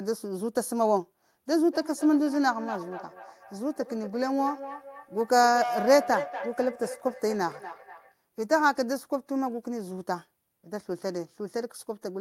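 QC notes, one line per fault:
1.54–8.15 s, feedback echo between two devices: each stretch of speech returns a fixed interval behind itself, roughly a fifth of a second, with a thinner, ringing quality and peaking about 10 dB below the direct speech. Two devices in the same room are joined to one call. One plays back what the other's microphone sent, and that microphone picks it up again. Neither echo canceller catches it, because each removes only its own device's playback.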